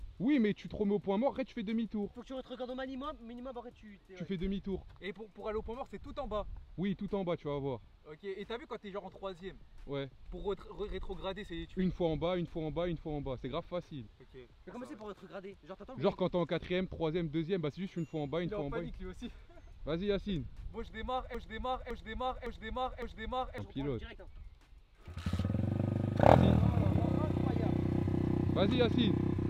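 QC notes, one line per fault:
21.35–23.58 s: broken-record loop. A 0.56 s fragment repeats exactly four times, likely from a stalled stream resending its last buffer. The intervening audio is lost.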